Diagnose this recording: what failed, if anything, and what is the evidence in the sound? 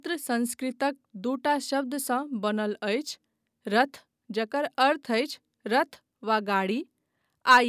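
Nothing failed, and nothing in the sound of this speech recording gives evidence of a fault.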